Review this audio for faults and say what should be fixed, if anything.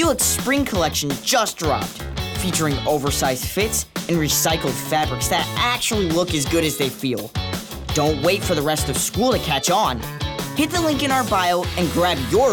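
Filter restarted on every block, from 0.0 to 6.55 s: the filter drops its stored state at each block boundary and restarts from silence, so each block opens with a small transient. The result is a buzz at about 23.4 Hz that follows the signal level, which fits a 2048-sample block. To prevent it, keep the filter's state variables between calls so that each block continues from where the previous one ended.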